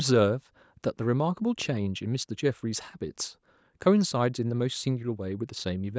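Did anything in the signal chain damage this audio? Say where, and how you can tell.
No, nothing in the chain damaged this speech; it simply went through a call's microphone processing, which is why there's no content above 8 kHz and the lowest bass is trimmed away, and that's just how that stage normally shapes the sound.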